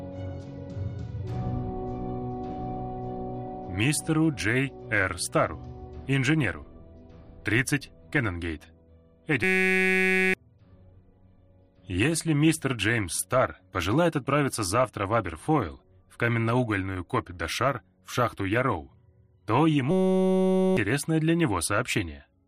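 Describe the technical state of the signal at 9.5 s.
At 9.5 s the signal is caught in a system hang loop, lasting from 9.44 to 10.34 s. A 5.33 ms fragment, consistent with a 256-sample buffer, repeats 169 times, producing a steady 188 Hz buzz. The waveform shows identical cycles, and the spectrogram shows flat harmonic lines at 188 Hz multiples. About a second of audio is lost.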